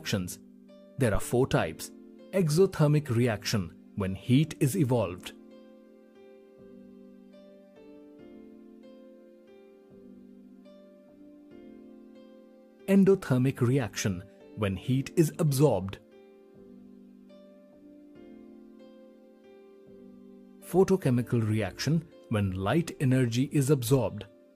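At 1.15 s a phantom power thump appears, lasting until about 1.27 s. Supply voltage was switched on a live input. The step passed through the coupling capacitors. It sounds like a deep thump peaking near -18 dBFS, decaying within about 29 ms.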